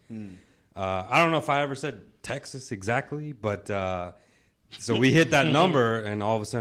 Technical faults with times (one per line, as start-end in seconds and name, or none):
none